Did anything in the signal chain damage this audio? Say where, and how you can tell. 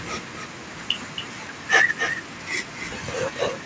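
Yes. Echo with no canceller sits in the call processing at the far end and runs through the whole clip: every phrase is trailed, roughly a third of a second later, by a thinner copy about 7 dB below the speech. A loudspeaker was feeding its microphone, with nothing subtracting it.

A drift correction step appears between 1.69 and 2.33 s: speed rises about 6% and pitch about 102 cents, roughly a semitone, together. That points to a buffer stage, likely clock-matching software abruptly resampling to refill or drain its buffer.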